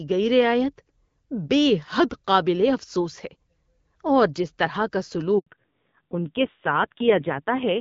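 At 5.39 s, just after "اور جس طرح کا", the speech cuts out in a handover gap. The call was passed from one network to another. For 80 ms no speech frames reached the receiver. The voice collapses almost instantly and leaves a hole of silence. It returns at 5.47 s, once the new link carries audio. Whatever was said inside that 80 ms is simply gone.

From 5.47 s to the end, the call shows a fallback to narrowband. Before the switch, the HD Voice (AMR wideband) path carried clear, light-damage speech with its brighter top end. After it, nothing above 4 kHz survives. The voice sounds muffled and boxy. Its texture also turns grainy and rough. That roughness fits a low-rate narrowband AMR mode, around 5.9 kbit/s.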